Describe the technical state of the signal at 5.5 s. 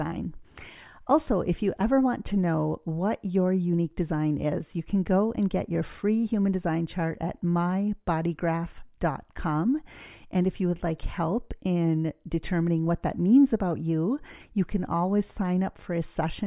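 At 5.5 s the signal is intact, with no audible technical fault at that moment.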